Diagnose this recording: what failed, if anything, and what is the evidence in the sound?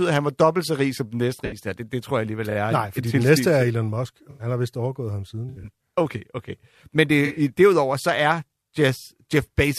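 Corrupt frame concealed, at 1.45–1.58 s, 4.30–4.46 s, 5.49–5.66 s and 7.25–7.40 s, in the codec stage: the AAC decoder detected damaged frames and covered them instead of playing garbage.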